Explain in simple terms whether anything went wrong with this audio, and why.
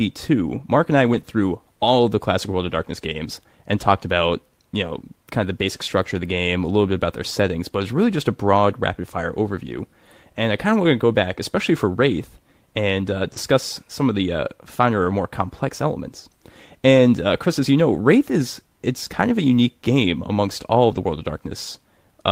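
Several very brief rough, fuzzy patches break into the speech, at 1.13 to 1.19 s, 13.35 s, 15.09 to 15.11 s, 19.05 to 19.07 s and 20.91 to 20.97 s. Nothing goes silent, but each patch sounds grainier. This is a lost packet rebuilt from error correction. Pieces of the call got lost in transit, but the next piece carried a cheap backup copy, which the receiver played instead. The two longer patches point to a couple of separate lost pieces.

Two other spots, 1.21 to 1.25 s and 13.33 to 13.37 s, sound like a tiny smear or wobble, as if the sound briefly stretched. This is short concealed packet loss. About 20 ms of audio never arrived and no backup was available, so the receiver continued the last sound it had to fill the hole, then blended back into the real audio. Both fall right beside the rougher patches, as though the connection stumbled twice in quick succession.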